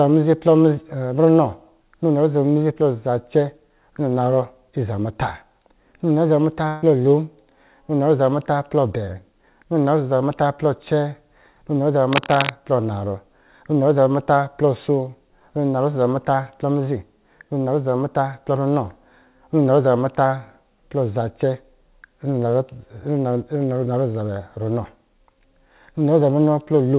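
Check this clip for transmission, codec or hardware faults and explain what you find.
Two faults can be heard in the speech.

From 6.68 to 6.84 s, the last sound is held and fades out, and the speech jumps ahead. This is a burst of packet loss: about 140 ms went missing and was filled by concealment.

From 12.13 to 12.50 s, rough, uneven scratching sits nearly as loud as the speech. This is cable scratch noise, likely from a worn connector or cable being moved.

The call path's G.711 A-law coding leaves nothing above 4 kHz, which gives the band-limited telephone sound.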